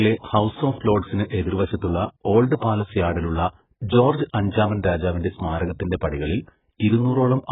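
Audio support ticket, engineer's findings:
Dull, band-limited speech throughout; nothing above 3.8 kHz, sibilants smeared and fizzy, vowels warbling. Likely AAC compression: AAC-LC quantising its frequency lines at a starved rate, consistent with around 8 kbps, heavy damage. Spectrogram: hard ceiling at 3.8 kHz, patchy holes and blotchy noise-filled bands below it. Waveform: no clear sign; check the spectrogram.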